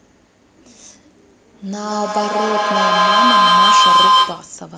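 A speech recording breaks into feedback howl from 1.62 s to 4.63 s. A tone of around 1 kHz swells until it peaks about 11 dB above the voice, with a loop delay of roughly 150 ms. Microphone and loudspeaker are feeding each other with gain above unity, so each pass reinforces the loop's favoured frequency. A spectrogram would show a bright horizontal line near 1 kHz, and the waveform would show a growing, swollen envelope.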